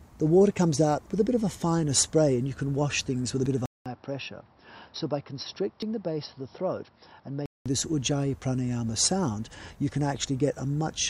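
At 3.46 s and 5.82 s the sound skips ahead. Each jump loses about 20 ms, likely a dropped buffer (overrun). From 3.66 s the audio goes silent for 200 ms, then returns duller and about 5 dB quieter, with new noise about 45 dB down. This is likely the input switched to a poorer device. The fuller sound returns at 7.66 s.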